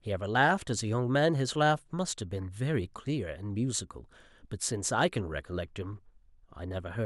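No technical faults can be heard in this speech.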